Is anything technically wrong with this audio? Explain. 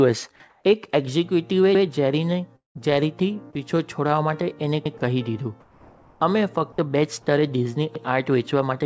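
Yes, there are three kinds of fault, heard through a call path whose G.722 coding leaves nothing above 8 kHz.

From 0.50 to 0.64 s and from 5.60 to 6.20 s, the background turns into steady, featureless hiss, about 6 dB louder in the first and about 4 dB quieter in the second. The likely cause is comfort noise in place of the background, synthesised while transmission paused. On a spectrogram it appears as smooth, uniform bands.

From 2.56 to 2.81 s there is a long network dropout. The last sound buzzes briefly, then about 150 ms of silence follows, and the waveform flattens to near zero before the audio resumes. A stretch is likely lost in transit.

At 4.85 s, overlapping chunks replay 100 ms of audio at a join between 3-second blocks. This is heard as a stutter, and the waveform shows a repeated segment.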